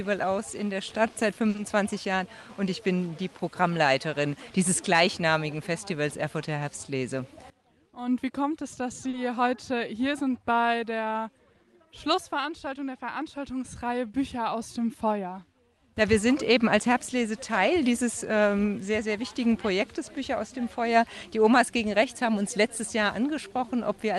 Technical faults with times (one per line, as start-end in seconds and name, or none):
0.89-1.75 repeated stalls (stutter)
9.09-9.15 short stall from a late packet